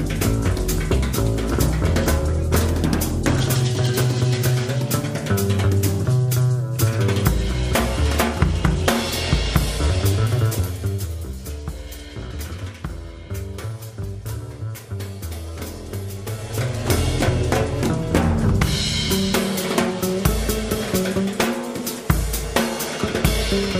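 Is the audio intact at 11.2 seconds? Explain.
No. At 11.2 seconds the sound carries a fine ticking, zipping texture as its level falls, part of a stretch of zipper noise running from 10.35 to 11.38 s. The drop of roughly 10 dB isn't applied as a continuous fade but in 1 dB jumps, around ten a second, with no smoothing between them. Each abrupt jump leaves a tiny click, and the string of clicks rides on the sound until the level settles.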